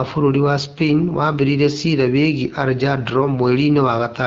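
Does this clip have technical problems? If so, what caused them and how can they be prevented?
Yes. AMR wideband (HD Voice) codec damage runs throughout: raspy, rough speech with nothing above 7.5 kHz, which fits a low 8.85 kbit/s mode. Use 12.65 kbit/s or higher.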